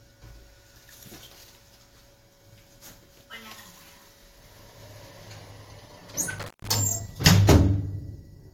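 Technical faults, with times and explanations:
6.39–6.74 s, intermittent contact: a connection in the signal path briefly opens, so the sound drops out for about 156 ms inside this span, with crackle as the contact scrapes open and again as it closes. On a waveform this is a sudden collapse to near-flat with spiky bursts at both edges. On a spectrogram it is a dark vertical gap, faintly filled by low-level hiss, bracketed by thin broadband streaks from the crackle.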